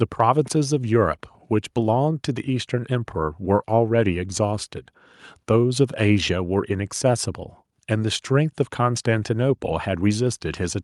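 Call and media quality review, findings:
No faults found; speech audio shows no defects.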